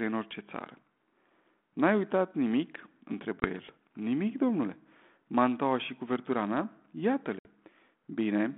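Speech over a band-limited ADPCM telephone line shows packet loss on an ADPCM call twice. Silent holes with hard edges open at 3.40 to 3.45 s and 7.39 to 7.46 s, losing 20 ms and then 60 ms. That fits a couple of packets, then several. Afterwards the decoder's predictor and step size no longer match the sender's, so speech resumes slightly distorted before settling.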